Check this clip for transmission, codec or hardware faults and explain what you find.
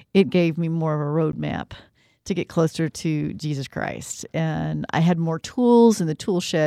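One fault stands out in this speech clip. At 1.32 s, just before "roadmap to get closer", the sound drops into a brief hole of about 12 ms with softened edges, then resumes where it stopped. This is a gap at a join of encoded pieces: separately encoded segments were spliced untrimmed, leaving encoder start-up delay and end padding as silence.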